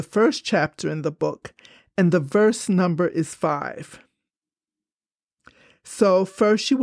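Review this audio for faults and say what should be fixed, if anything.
Nothing stood out on listening to this speech clip, so there is nothing here that needs fixing.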